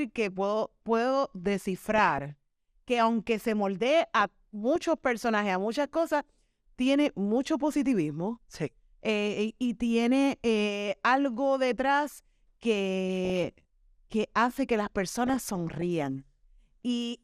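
MP2 compression runs through the whole speech clip: the top end sounds dull and a granular, gurgling roughness sits on the voice, which fits MPEG Layer II at a bitrate around 80 kbps. Too few bits are spread across its 32 sub-bands, so upper bands drop out and flicker back while the remaining ones are coarsely quantised. This is likely the cause of the plainly audible damage heard throughout.

DAB burbling breaks in at 1.77 to 2.30 s, after "que puedo puedo" and before "que aunque se moldee", and again at 4.19 to 4.76 s, between "que aunque se moldee" and "personajes a muchas cosas". It returns at 13.10 to 13.45 s and at 15.26 to 15.82 s, just after "que hace que las". Bit errors slip past error correction into the MP2 data: corrupted samples put short blips of noise in single sub-bands, and corrupted scale factors make sub-bands jump in level for up to a frame. Most bursts last around half a second and damage some two dozen frames each; the third lasts about 0.35 s and damages 19 frames. 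The last burst has a higher error rate, about 0.5% against 0.3%.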